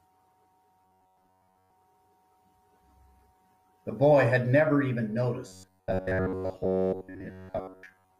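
From 0.82 to 1.70 s and again from 5.47 s to the end, the speech becomes a rigid, metallic robotic sound with a 93.8 Hz buzz, likely from repeating short buffers in place of most of the real audio.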